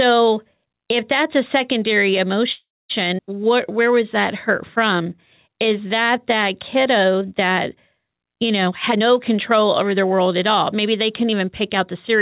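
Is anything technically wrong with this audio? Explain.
Yes. The clip shows five timing faults typical of a packet-based call, carried over a narrowband link whose sound stops at 4 kHz, which fits G.711 mu-law at 64 kbps.

A call audio freeze runs from 2.52 to 2.92 s. The likely cause is packets held up in transit, so the jitter buffer ran dry and the receiver had nothing new to play. It stretched the last sound into a fading buzz for a short while, then fell silent for about 240 ms. In all, roughly 375 ms of filler was inserted. When audio returns it picks up exactly where it left off, so nothing is lost and the speech is simply pushed later.

A skip ahead occurs at 3.18 to 3.20 s. Here a stretch of roughly a tenth of a second was discarded while later audio was already queued, probably as the buffer shed the delay the freeze had built up. Playback leaps forward with only an 8 ms bridge. 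The sound on either side of the cut is butted together almost directly, so a fragment of speech vanishes abruptly.

Jitter buffer slow-down appears twice, from 3.43 to 4.04 s and from 4.78 to 5.54 s. In both spans the buffer was rebuilding a reserve, so the receiver repeated single pitch periods and slivers of pause over and over. This added 54 ms and 62 ms respectively. The speech plays at 92% and 93% of normal speed with unchanged pitch, so sounds are slightly drawn out and may carry a faint warble.

Jitter buffer speed-up runs from 8.65 to 11.94 s. The buffer was holding more audio than its target, so the receiver repeatedly cut out short pieces one or a few pitch periods long, removing around 0.4 s in total. The speech runs at 111% of normal speed at the same pitch and comes across as noticeably hurried across those three seconds.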